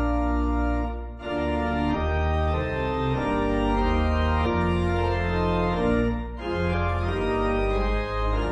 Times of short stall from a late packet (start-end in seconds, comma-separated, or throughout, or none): none